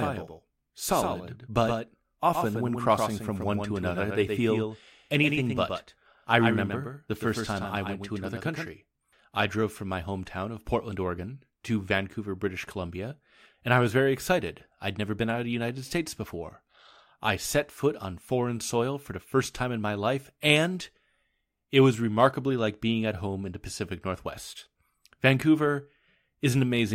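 A speech recording opens with a doubled audio track: from the start to 8.68 s, a full-band copy trails about a tenth of a second behind, roughly 5 dB quieter and without room colour, then stops abruptly. It likely comes from a second, slower capture path.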